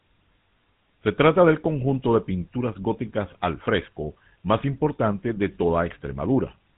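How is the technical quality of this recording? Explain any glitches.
The recording is speech passed through a low-rate mobile telephone codec, and the codec's damage is plainly audible for the whole clip. Throughout, the sound carries the signature of the GSM full-rate codec. That codec models the vocal tract as a filter and drives it with a sparse, regularly spaced pulse train, so fine detail in the excitation is discarded. The result here is a buzzy, gravelly roughness on the voice, which fits a bitrate of about 13 kbps. The band stops at 3.8 kHz, so sibilants and breath lose their brightness and the speech sounds narrow and muffled.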